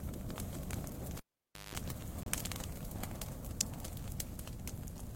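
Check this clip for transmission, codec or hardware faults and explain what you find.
Two faults are audible: a cable being pulled and reinserted early in the clip, and a short silent gap shortly after.

Cable pulled and plugged in, from 1.17 to 1.75 s. A live connector is withdrawn and pushed back while the signal is running. A pop marks the break, then the sound drops to near silence for about 535 ms. As the plug goes back in and only the tip makes contact, the ungrounded input picks up 50 Hz mains hum, heard as a harsh buzz lasting about 176 ms. A second pop follows when the sound returns.

Gap between stream segments, from 2.23 to 2.26 s. Two consecutive segments do not line up in time, leaving a small hole in the timeline. The player fills it with silence, so about 31 ms of dead air with abrupt edges cuts into the sound. No content is lost; the rest simply arrives slightly late. Only one such gap falls within this clip, which fits a stream cut into segments several seconds long.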